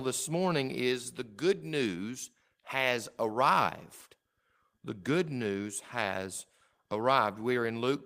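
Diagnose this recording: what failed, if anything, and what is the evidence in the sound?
Nothing in the recording points to a failure at any stage, from the analogue wiring and converter through buffering and format conversion to transport, storage and playback.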